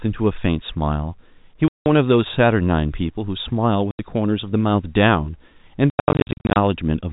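At 1.68 s the speech cuts out for 180 ms, again at 3.91 s for 80 ms, and from 5.9 to 6.56 s it stutters through a run of short gaps adding up to 470 ms, the longest about 90 ms. That's packet loss filled with silence: packets never arrived, so the receiver played nothing there, leaving hard-edged holes. The gap lengths fit 10 ms packets. The narrowband G.711 telephone sound around them comes through intact.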